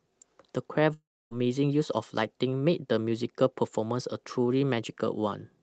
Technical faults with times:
0.93-1.33 long network dropout

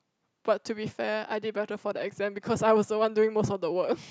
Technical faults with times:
none

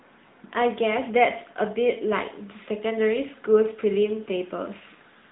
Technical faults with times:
0.00-5.32 AMR narrowband mobile codec

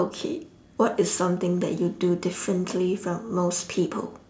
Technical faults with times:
none

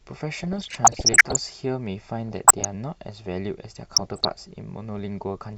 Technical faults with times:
0.44-1.36 DAB burbling
2.29-2.71 DAB burbling
3.92-4.30 DAB burbling

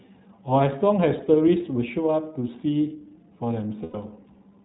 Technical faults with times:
0.00-4.64 iLBC codec
3.84-3.96 lost iLBC frames

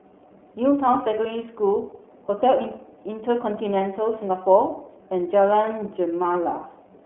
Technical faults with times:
0.00-7.06 iLBC codec

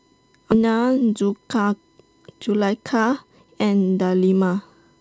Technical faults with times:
0.00-5.00 USB whine
0.52 skip ahead
1.07-1.39 jitter buffer speed-up

